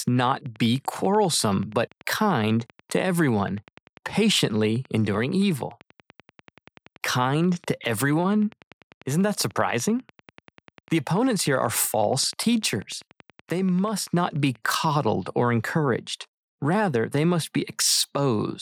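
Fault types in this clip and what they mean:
Train of clicks: a repeating pulse is getting into the signal chain, most likely interference from nearby equipment or a faulty connection or power supply. It shows as a steady ticking laid over the speech from about 0.08 s to 14.85 s, roughly 10.3 clicks per second at even spacing, around 150 in all. Each click has much the same shape and reaches roughly the level of the speech itself, so the ticking stays plainly audible through the pauses as well.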